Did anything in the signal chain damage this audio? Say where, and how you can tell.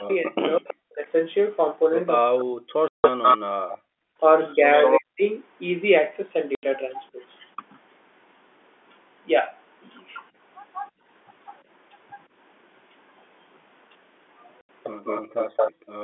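Yes. The damage comes from the call processing and the network.

Speech suppressed in double talk: from the start to 7.58 s, the echo canceller on this talker's side most likely could not tell its own talker from loudspeaker echo while both sides spoke, so it turned both down. The speech dips and breaks up in pieces, about two seconds in total across that stretch, with the deepest cuts reaching roughly 40 dB down. The level drops too sharply and too briefly to be the talker's own doing.

Echo leak: from 0.11 s to 15.72 s, a second copy of the speech trails the original by 193 ms, at about the same loudness. That points to a loudspeaker endpoint whose echo canceller likely left much of the microphone pickup in place and sent it back down the line. The fixed delay is the giveaway. A room reflection would be far shorter and much quieter than the direct sound.

Packet loss filled with silence: this is a network fault. 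Holes of dead silence with hard edges appear at 2.88 to 3.04 s (160 ms), 6.55 to 6.63 s (80 ms) and 14.61 to 14.69 s (80 ms). The lengths are exact multiples of one another, which fits 10 ms packets being dropped and replaced by silence rather than concealed.

Background gated by the echo canceller: this is call processing. The room sound collapses while the loudspeaker plays, by about 40 dB at 3.96 to 4.19 s, about 28 dB at 10.9 to 11.05 s, and about 40 dB from 15.23 s to the end. The canceller is clamping the microphone hard rather than subtracting echo. The floor snaps back when it releases, heard within the G.711 telephone band of roughly 250 Hz to 3.5 kHz.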